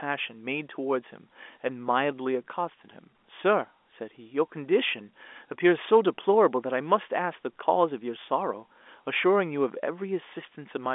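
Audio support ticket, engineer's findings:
Nothing stood out on listening to this telephone-band speech recording.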